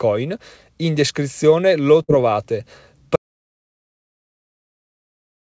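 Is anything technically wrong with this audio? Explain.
Yes, there are two faults in this speech, heard through a call path with nothing above 8 kHz, which fits a wideband codec such as G.722.

A burst of packet loss runs from 2.03 to 2.11 s, just after "descrizione lo". The receiver stretches the last sound for about 52 ms, fading it as a held buzz or hiss, then resumes with roughly 60 ms skipped. Unlike a dropout, the gap is filled rather than silent.

An audio dropout to silence begins at 3.16 s and lasts to the end. The sound cuts off mid-flow into silence with no room tone, likely from a lost input or a mute while recording continued. Nothing is concealed or faded, which sets it apart from packet loss.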